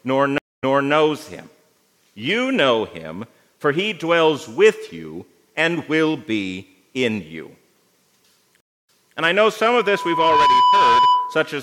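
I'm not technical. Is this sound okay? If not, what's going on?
No. The stream reconnect happens twice, at 0.38 and 8.60 seconds. The connection drops, and you hear about a fifth of a second of silence. Then the sound restarts about a third of a second earlier, so a short stretch repeats.

There is also a loudspeaker feedback squeal from 9.75 to 11.57 seconds. A microphone is picking up its own speaker. One tone near 990 Hz swells over about 0.7 seconds into a whistle that sits above the rest of the sound.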